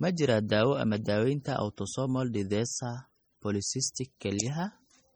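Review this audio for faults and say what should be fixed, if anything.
MP3 compression artefacts run throughout the speech: the treble is cut off, the sound is watery and swirly, and s sounds chirp metallically as weak frequency lines switch on and off between frames. The heavy damage likely comes from an MP3 encode at a very low bitrate, which fits around 32 kbps. To prevent it, keep the original uncompressed recording or re-encode it at a much higher bitrate.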